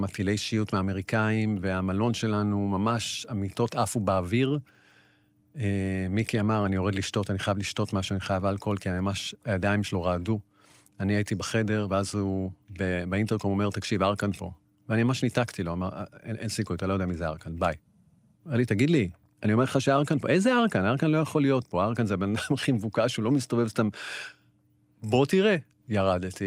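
Nothing stood out as a technical problem anywhere in the recording on listening.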